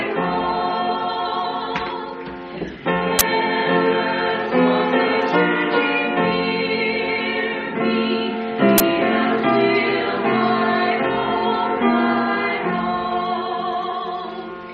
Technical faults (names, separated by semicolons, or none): AAC frame loss with concealment; uninitialised buffer